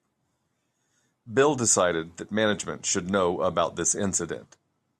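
No technical faults can be heard anywhere in this recording.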